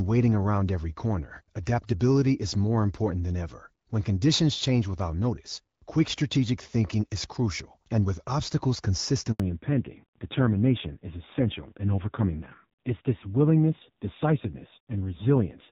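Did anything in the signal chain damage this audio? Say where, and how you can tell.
Yes. At the network stage, right after "crucial and with obstacles", there is a handover gap from 9.32 to 9.40 s. The sound fades within a few tens of milliseconds and stays silent for 80 ms while the call moves between networks and no frames arrive. Unlike a buffer underrun or a dropout, it is one clean hole with no click or repeated fragment, and the audio after it sounds different.

The codec stage shows a fallback to narrowband from 9.40 s to the end. Before that point the HD Voice (AMR-WB) path carries clear wideband audio with only light coding softness, consistent with a mid rate around 12.65 kbit/s. After it, nothing above 4 kHz survives, and the sound turns dull and gritty, which fits the narrowband AMR codec at a low rate near 5.9 kbit/s. A plain low-pass filter would remove the top without adding that raspy texture.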